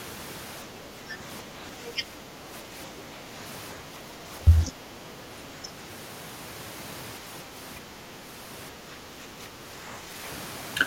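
Speech suppressed in double talk occurs at 0.67–1.6, 1.93–3.31, 3.81–5.03, 7.21–7.97 and 8.72–10.17 s in this speech recording. In each stretch the talker's level sags by about 5 dB. The likely cause is an echo canceller that could not tell the near talker from the far side's loudspeaker sound while both were active, so it pulled down the whole microphone signal. The other side's voice leaking through appears briefly at 4.66–4.71 s as a short scrap of a second voice, only about 5 dB below the talker and landing inside the third suppressed stretch. The far-end audio playing on the loudspeaker was likely not fully cancelled from the microphone, so a fragment of it passed into the recording.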